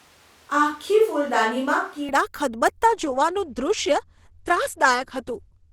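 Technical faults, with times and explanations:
0.0 to 2.09 s, switch to a distant microphone: The close microphone's feed was most likely lost or left out, so the recording picks the speech up from a microphone further away. The sound is already roomy and hollow when the clip starts, with thin bass, because the far microphone hears more of the room's reflections than of the direct sound. The level barely changes. Faint room noise sits about 35 dB below the speech. Around 2.09 s the close pickup returns abruptly.
2.86 to 5.72 s, adaptive stream at a lower bitrate: The stream falls back to a lower-bitrate version, which fits a drop from Opus at around 64 kbit/s to around 12 kbit/s. The quality changes suddenly, without a gap, and stays degraded to the end of the clip. With so few bits available, the encoder discards everything above 12 kHz, so the treble is cut off. The speech takes on a duller, smeared character as coding artefacts build.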